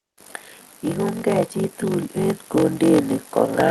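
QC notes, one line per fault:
Throughout: block size mismatch (padded). There's a steady buzz at about 46.9 Hz under everything, and the speech drags, running at roughly 0.861 of normal speed while the timbre stays about where it should. One stage is handing over shorter blocks than the next one reads, so each read gets topped up with zeros. That short silent gap recurs once per block, which fits a 1024-sample read, giving the buzz and stretching the timing.
1.23 to 3.09 s: automatic gain rising. Over nearly two seconds the level creeps up by about 3 dB, and the speech and the background noise swell together. That shared rise is the giveaway. The automatic gain control decided the input was too quiet and eased its gain upward gradually rather than jumping, so you hear a slow lift in overall loudness instead of a sudden step.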